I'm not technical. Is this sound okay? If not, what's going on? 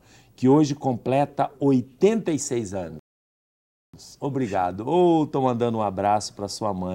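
No, there's one hiccup. At about 2.99 seconds the sound just stops dead and goes silent until about 3.94 seconds, then picks up exactly where it left off. That's a rebuffering stall: the player ran out of audio it had already downloaded and had to wait for more to arrive. Nothing gets skipped, so you don't miss anything. It just adds almost a full second of dead air.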